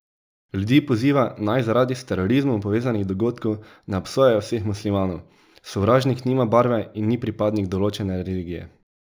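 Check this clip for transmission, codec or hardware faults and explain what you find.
One fault runs through the whole clip: imaging from linear upsampling. The speech has a dulled top end, and a faint metallic shimmer rides on sibilants. That fits a 16 kHz source raised to 44.1 kHz by drawing straight lines between samples. Straight-line interpolation filters poorly. It softens the upper band and leaves a mirror copy of the spectrum from 8 to 16 kHz. That image sits roughly 35 dB below the speech. It is quiet but audible as a glassy edge.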